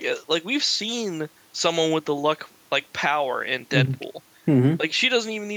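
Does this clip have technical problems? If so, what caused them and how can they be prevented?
No, no technical problems here.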